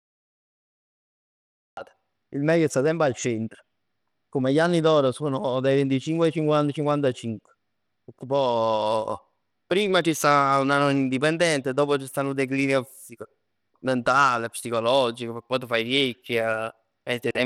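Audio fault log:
throughout: Bluetooth SBC compression. The audio was most likely squeezed through SBC, which splits the signal into a handful of wide sub-bands and hands out bits with no model of hearing, so at a tight setting the quieter upper bands are starved and the rest quantised coarsely. The damage is plainly audible in this speech: treble thins and flickers, and a gritty, aliased roughness rides on the voice, which fits a low link rate around 96 kbps.
0.00–1.77 s: Cut-off start. The recording or stream began late, so the opening 1.77 s is digital silence and the sound switches on abruptly at 1.77 s, already partway through speech. With no natural attack or lead-in fade, the entry lands as a hard edge rather than a build, because the capture missed the start of whatever was being said and simply picked it up mid-flow at that instant.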